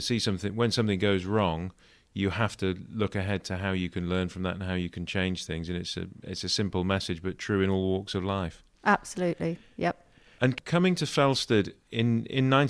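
Speech recording with no audible technical faults: no dropouts, level problems, distortion or timing errors anywhere in the clip.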